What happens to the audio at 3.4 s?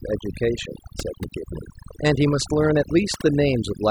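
At 3.4 s, as throughout, overdone noise removal gates individual frequency bands near the noise estimate, leaving twinkling specks in near-silence, unlike steady band-limited dullness.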